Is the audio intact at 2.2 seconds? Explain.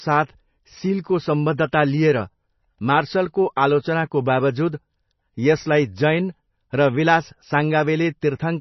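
No, at 2.2 seconds the whole clip has heavy MP3 compression, likely from a very low bitrate: treble stops near 5.9 kHz and the speech sounds watery, with swirly, chirpy sibilants.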